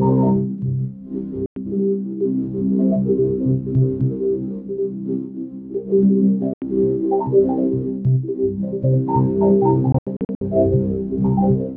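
A recording of sounds with three holes of silence: about 0.1 s at 1.46 s, 0.08 s at 6.54 s, then a broken stretch from 9.92 to 10.41 s. The sound picks up as if it kept playing, likely a Bluetooth dropout losing packets on the way to the headphones.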